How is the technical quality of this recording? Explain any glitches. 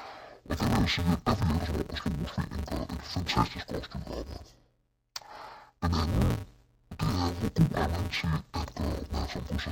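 The technical quality is poor. One fault runs through the whole recording. It is interleaved audio read as planar. Each 5.8 ms block of alternating left and right samples was split into halves. Each half was played as one channel. With blocks this short, the speech sounds dull and robotic. A buzz sits at the 172 Hz block rate. There is no clear octave drop. The block length fits a 256-sample buffer.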